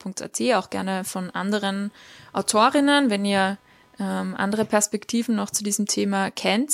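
Speech recording with computer activity noise from 1.21 to 4.62 s, just after "auch gerne": a chirping buzz pulsing around 300 Hz, roughly 35 dB below the speech. Unlike steady mains hum, it starts and stops with computer load disturbing the shared ground.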